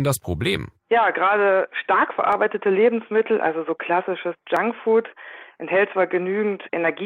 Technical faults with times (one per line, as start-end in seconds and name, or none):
2.32 dropped buffer (overrun)
4.56 dropped buffer (overrun)